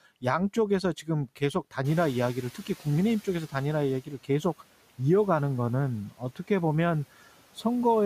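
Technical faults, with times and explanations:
1.27–1.74 s, 4.06–4.44 s and 6.11–6.5 s, speech cut by the noise suppressor: within each span, short stretches of speech adding up to roughly 0.1, 0.15 and 0.1 s are pulled down with the background, by up to about 11, 10 and 9 dB respectively. The suppressor misjudged these quieter speech parts as noise and attenuated them, so consonants or endings in those windows sound swallowed and faint rather than cleanly articulated.
1.84–4.0 s, noise suppressor catching up: the room noise jumps by about 18 dB around 2 s, and the suppressor's noise estimate still reflects the quieter earlier background. The louder noise therefore comes through with less reduction at first, then gradually sinks as the estimate adapts over about 2.16 s, settling at roughly 9 dB of cut, with the room noise ending up about 24 dB below the speech.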